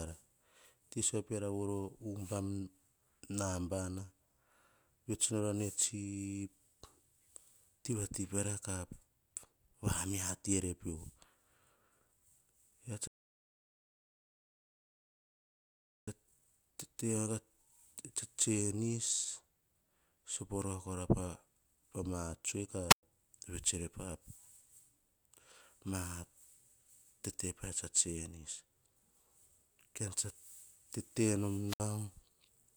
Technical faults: rebuffering stall; wireless microphone squelch dropout

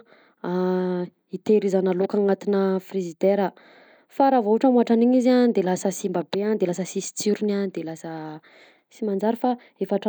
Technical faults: none

